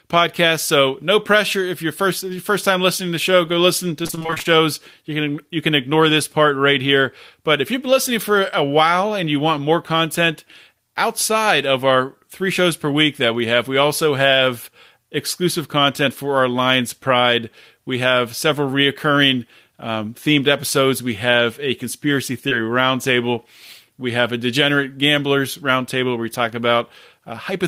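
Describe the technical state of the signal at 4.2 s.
At 4.2 s the signal is inside a stretch of repeated packet loss (robotic sound), running from 4.03 to 4.47 s, just after "show go listen". About a dozen short holes, none longer than 26 ms, follow one another closely. Each is patched by extending the preceding sound, so roughly half of the span is concealed rather than real signal. The speech turns choppy, with fragments missing between the patched segments.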